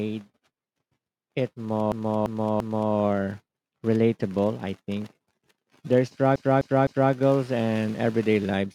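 A run of compressed frames in this speech clip was delivered more than once, so the decoder replays the same stretch. From 1.92 to 2.94 s a 341 ms block, which fits about four frames, plays three extra times and adds 1.02 s. From 6.36 to 7.12 s a 256 ms block repeats three more times and adds 0.77 s. Both are heard as repeated frames: a stuttering loop that stretches the audio.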